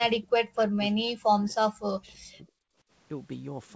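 Speech clip in which the talker's level repeatedly collapses from 0.0 to 2.52 s, dipping by up to about 40 dB across roughly two seconds; this is likely speech suppressed in double talk, with the echo canceller ducking the near-end voice while the far end spoke. From 2.33 to 2.38 s a very faint copy of the voice, delayed by 334 ms, slips through as a short echo leak, consistent with residual loudspeaker echo the canceller failed to remove.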